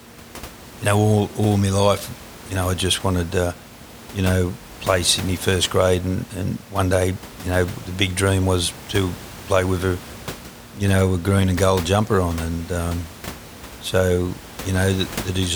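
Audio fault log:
No fault in this audio; the room noise sits about 17 dB below the speech and belongs to the recording.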